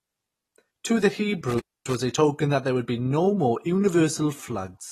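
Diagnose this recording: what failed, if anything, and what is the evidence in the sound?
The whole speech clip carries plainly audible coding damage, with nothing above about 14.1 kHz and a smeared, warbling texture on sibilants. That's likely AAC compression at the codec stage, fitting AAC-LC at around 32 kbps. At that rate the encoder quantises its frequency lines coarsely against the hearing model, drops the top band and leaves holes or substitute noise in the spectrum, so the fizz sits in the signal the whole way through.

Separately, from 1.50 to 1.95 s there's an intermittent contact fault, and that points to the analogue wiring rather than anything digital. A loose plug or cable lets the connection open and close, so the sound breaks up with crackle at the edges of each break, and the line stays open for about 262 ms in total across that stretch. The raggedness of the edges is what gives it away as a physical contact and not a clean digital dropout.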